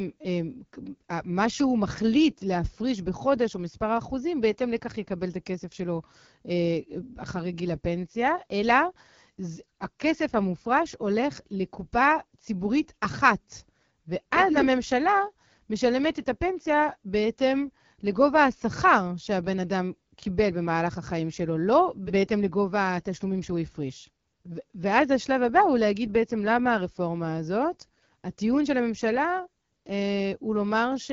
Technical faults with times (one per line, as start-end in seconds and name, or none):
0.00-31.13 AMR wideband (HD Voice) codec